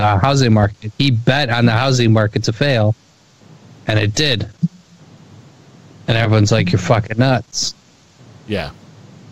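Nothing stood out as a technical fault on listening to the clip.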